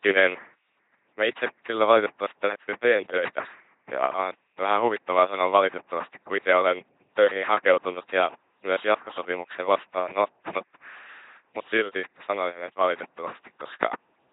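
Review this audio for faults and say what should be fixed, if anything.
LPC-10 vocoder damage runs throughout the speech: every moment is synthesised as wholly voiced pulses or wholly unvoiced noise through a ten-pole filter, giving heavy buzzy robotic distortion that fits a 2.4 kbit/s coder. A spectrogram shows comb-like harmonics and nothing above 3.8 kHz. Prevent it by recording or transmitting through a modern wideband codec instead of a low-rate vocoder.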